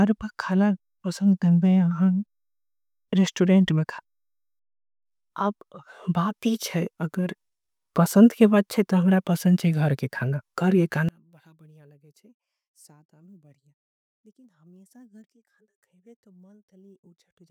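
From 11.09 s to the end at 17.5 s, the speech collapses when heard in mono. The level drops by about 34 dB. What remains is a faint trace. The likely cause is one channel inverted. One side of the stereo pair has its polarity flipped. The centred speech is common to both sides, so summing them cancels it. Only the small difference between the channels survives.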